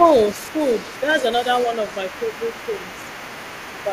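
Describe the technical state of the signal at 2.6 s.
At 2.6 s there's other side's voice leaking through, running from 0.03 to 3.93 s, a faint second voice around 20 dB under the speech, likely speakerphone echo the canceller missed.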